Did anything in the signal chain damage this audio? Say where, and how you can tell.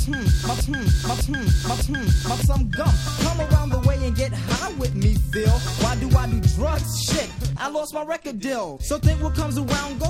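Yes. A broken-record loop runs from the start to 2.42 s: a 0.6 s fragment, already looping when the clip opens, repeats exactly three times. This likely comes from a playback or stream buffer stall re-sending its last fragment, so the audio due there is lost.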